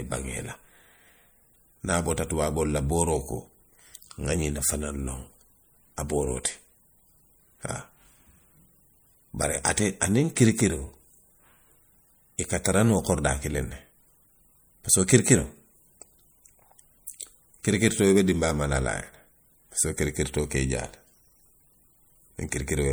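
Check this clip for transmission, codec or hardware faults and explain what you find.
Two codec faults are present in the speech.

MP3 compression: throughout, the audio has a plainly audible watery, swirling texture. Nothing is present above 21.1 kHz. The likely cause is an encoder short of bits, fitting around 64 kbps, dropping weak frequency lines that flicker on and off between frames.

Pre-echo: at 17.07 s, a brief hiss of about 11 ms leads into a sharp attack, which sounds softened. The codec spread quantisation noise across its whole block, so noise meant for the loud onset leaked into the quiet instant before it.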